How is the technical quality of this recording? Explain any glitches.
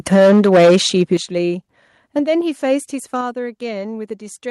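The technical quality is poor at the start, with distortion followed by a series of abrupt level drops.

From 0.07 to 1.14 s there is microphone overload, with peaks pushed about 9 dB past full scale, likely from input gain set too high. Roughly a sixth of samples are flattened, so the waveform shows squared-off tops, the spectrogram fills with broadband splatter, and the loudest syllables sound harsh and crackly.

The microphone volume is stepped down at 0.16, 1.17, 2.19 and 3.21 s, by about 3, 10, 4 and 4 dB. This is likely automatic gain control cutting the input after the clipping. Each drop appears as a sudden step in the waveform envelope and an instant darkening across the spectrogram, with voice and background falling together.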